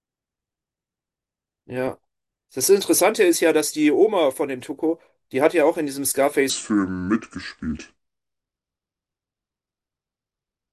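From 6.50 s to the end, the speech drops into a wrong sample rate fault: it plays at about 0.73 times normal speed and roughly 5.5 semitones lower, which fits 44.1 kHz audio played at 32 kHz. Because pitch and tempo fall together, this is not a pitch shift or time stretch.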